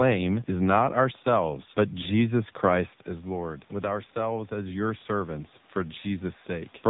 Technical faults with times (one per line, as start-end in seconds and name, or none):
0.00-6.90 AMR narrowband mobile codec
3.07-6.77 automatic gain rising